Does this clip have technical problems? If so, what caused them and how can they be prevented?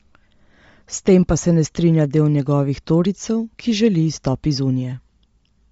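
Yes. Throughout the speech there is a breathy, grainy edge on the upper frequencies, and nothing is heard above about 7.7 kHz, so the sound is dull and hissy at once. The damage is plainly audible and points to likely Bluetooth LC3 compression. This transform codec works in short frames, here consistent with 10 ms. At a low rate, around 32 kbps, it drops much of the upper spectrum and fills the gaps with shaped noise, which causes the graininess. To prevent it, record over a wired connection or set the Bluetooth link to a higher LC3 bitrate and wider bandwidth.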